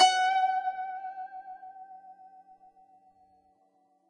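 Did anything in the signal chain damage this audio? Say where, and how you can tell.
Yes, the codec stage. Across the whole music clip nothing comes through above 10.6 kHz, and the remaining treble is grainy and hissy with smeared attacks, likely Vorbis compression at a low bitrate, roughly 24 kbps, where fine high-frequency detail gets quantised into noise.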